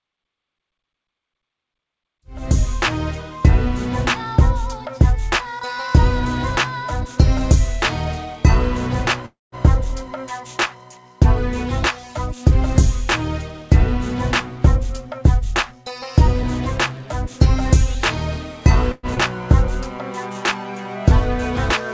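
At 9.26 s there's a call audio freeze lasting until about 9.55 s. The last bit of sound gets stretched into a fading buzz for a moment and then drops to near silence for about 180 ms before things carry on. Nothing is lost, but roughly a quarter second of gap gets wedged in. The likely cause is packets getting held up in transit until the jitter buffer ran dry.

From 13.83 to 18.76 s the jitter buffer speed-up kicks in. The receiver snips out tiny pitch-period slices over and over to claw back the built-up delay. Pitch stays put, but playback runs at about 101% speed, so you're losing a bit under a tenth of a second overall. It's subtle, staying below the point where it would sound hurried across those five seconds, rather than anything obvious.

Right after that, at 18.92 s, there's a second call audio freeze, shorter this time, ending at 19.06 s. It adds about 114 ms of filled-in sound that fades out, with only about 10 ms of near silence. 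It likely comes from another delayed batch of packets.

Then at 19.15 s there's a skip ahead. Playback jumps forward, dropping around a fifth of a second of audio, and the two sides are butted together almost directly. You hear it as a quick lurch where a chunk simply isn't there. The whole thing sits on a wideband call path with nothing above 8 kHz, and the fade-in near the start up to 2.72 s is smooth.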